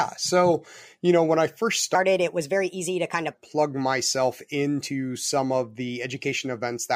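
From 1.95 s to 3.34 s, just after "know when I first", the speech suddenly turns high and hurried, running about four semitones sharp before snapping back at "plug myself into some". This is a section at the wrong speed: that stretch plays at 1.23 times its recorded rate, so pitch and tempo rise together. The likely cause is an edit or playback step that clocked this portion against the wrong rate.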